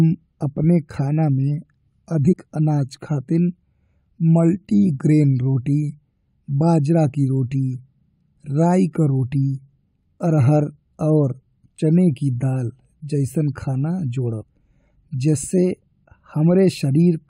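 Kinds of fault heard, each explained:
Damaged data in a compressed stream: corrupted bytes garble decoded frames, giving brief glitches at 2.31, 11.78 and 14.41 s, seen as thin vertical disturbances on a spectrogram.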